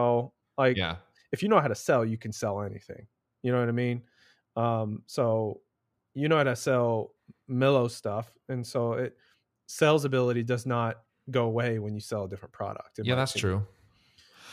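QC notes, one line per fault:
Nothing stood out on listening.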